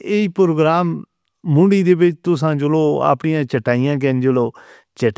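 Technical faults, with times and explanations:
No technical faults can be heard anywhere in the speech recording, and the signal stays continuous and steady across its full span.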